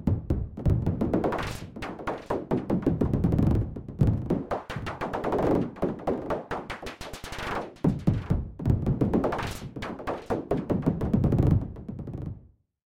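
Nothing stood out as a technical problem on listening to this recording of sounds.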